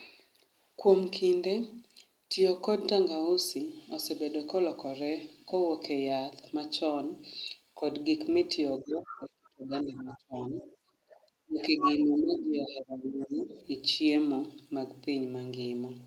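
From 8.79 to 11.11 s the talker's speech gets pushed down hard, by roughly 30 dB at its deepest: speech suppressed in double talk, likely because the echo canceller couldn't tell the near voice from the far-end echo while both were talking. Over the same stretch the other side's voice leaking through comes in scraps, at 8.9 to 9.49 s (fairly audible, around 15 dB under the speech), then faint blips at 10.1 s and 11.11 s. A second ducking follows from 11.45 to 13.55 s, about 20 dB at worst. Inside it, at 11.61 to 11.94 s, the leaked voice is roughly as loud as the talker, and a last faint trace sits at 13.21 to 13.62 s. That leakage is likely incomplete echo removal letting the loudspeaker reach the mic.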